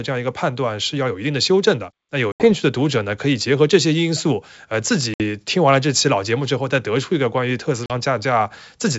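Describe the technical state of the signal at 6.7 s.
At 6.7 s the audio is intact, with the speech carried cleanly through G.722 wideband telephone coding at 64 kbit/s.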